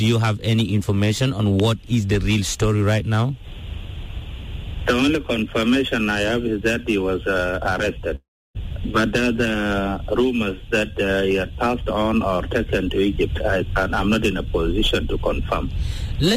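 A long network dropout runs from 8.15 to 8.57 s. The last sound is stretched into a fading buzz, then 0.31 s of near silence follows, and audio resumes with 0.4 s missing, likely because packets stopped arriving and the receiver concealed the gap.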